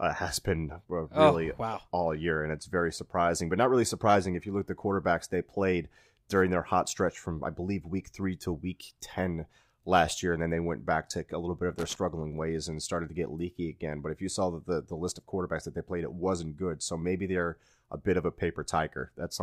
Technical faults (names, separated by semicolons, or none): loose connector crackle